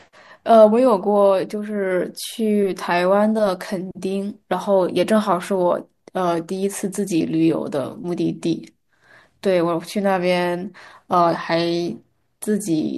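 A speech recording with no technical faults to report anywhere in the signal.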